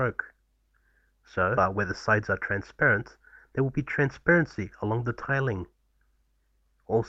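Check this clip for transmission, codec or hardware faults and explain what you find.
Two transmission faults are audible: a skip ahead early on, followed by a stretch of jitter buffer speed-up.

At 1.57 to 1.59 s there is a skip ahead. A run of audio was lost, either in transit or thrown out by an overflowing jitter buffer while newer audio was already queued. The receiver played the later audio straight away without filling the hole, so about a second and a half of material is missing. The sound on either side of the cut is joined almost directly, and playback lurches forward with no audible gap.

From 1.75 to 4.99 s comes a jitter buffer speed-up. The buffer was holding more audio than its target, so to pull the delay back down the receiver repeatedly cut out short pieces one or a few pitch periods long. Together these removals take out roughly a fifth of a second and make playback run at 106% speed while the pitch stays the same. 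Over those three seconds the sound comes across as slightly hurried and rushed.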